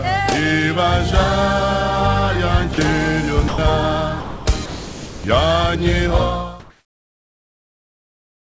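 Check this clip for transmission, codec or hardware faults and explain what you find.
There are two related transmission faults, both likely from a sender-side voice detector.

Sound dropped by the voice detector occurs at 2.74–2.78 s (40 ms), 3.48–3.58 s, 4.20–4.46 s and 4.66–5.24 s. The detector treated active sound as background, so the receiver substituted comfort noise. Each gap is heard as a brief dropout to flat hiss. On a spectrogram, the detailed content turns into uniform grey noise, and the waveform narrows to a low, even band.

Comfort noise in place of the background runs from 6.60 s to the end. Once sending stopped, the receiver generated synthetic noise roughly matching the background, which sits about 52 dB below the loudest parts and here comes out with a level change of about 5 dB. It sounds steady and featureless. On a spectrogram it shows as smooth, texture-free noise capped at 8 kHz, overlapping the fade-out that ends at 6.72 s.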